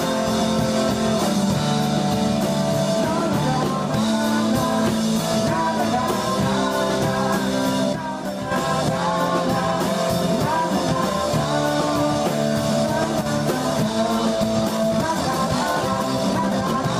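At 7.93 to 8.52 s, and briefly at 13.21 s, the level drops abruptly by about 6 dB, likely one channel dropping out before the mono sum. From 14.58 s to the end, the pace jumps to about 1.81 times faster at unchanged pitch, sounding rushed, likely a time-stretched section.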